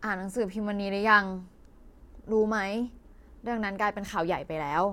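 No technical faults can be heard anywhere in the speech recording. Nothing in it stands out as a problem to locate or explain.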